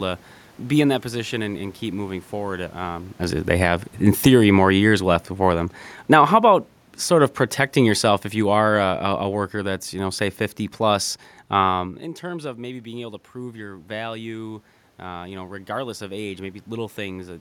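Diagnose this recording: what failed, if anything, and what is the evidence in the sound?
Automatic gain falling, in call processing. After "and keep moving forward", the level sinks about 6 dB from 2.9 to 4.43 s. It drops about 4 dB more from 4.97 to 6.4 s and from 7.1 to 9.52 s, before "that's you know say". Room noise sinks too. The gain control judged the input too loud, or its background noise too strong.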